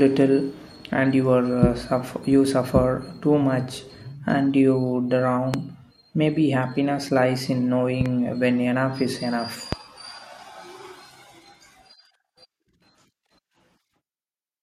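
A loud pop hits at 5.54 to 5.57 s, peaking about 15 dB above the speech. At 8.01 to 8.08 s comes a double pop, two quick thumps about 10 dB up. A third single pop lands at 9.73 to 9.75 s, again about 15 dB up. Each sits on top of the speech, which carries on underneath. The likely cause is a sudden voltage pulse, from static or a switch, entering the chain.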